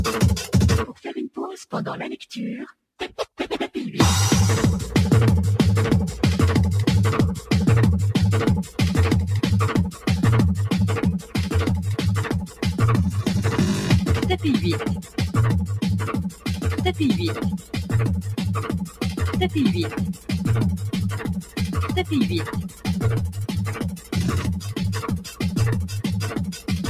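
Noise suppressor applied to music or sounds, throughout: a speech-oriented suppressor stays engaged across the whole clip and treats sustained, steady parts of the sound as background noise, pulling them down while sharp onsets pass largely intact. Its gain keeps moving by around 10 dB, so the level breathes and pumps rather than holding steady, and the body and ambience of the sound come and go with the processor's decisions.

Sound cut by the noise suppressor, at 8.64 to 8.79 s, 9.91 to 10.07 s, 11.19 to 11.35 s, 12.45 to 12.62 s, 15.0 to 15.18 s, 16.28 to 16.52 s, 17.57 to 19.2 s, and from 19.89 s to the end: the suppressor judges held or decaying sound to be noise and clamps it down. The early dips are short, dropping by about 8 to 12 dB. Later stretches sink by about 13 dB, with tails clipped short and the closing seconds audibly thinned.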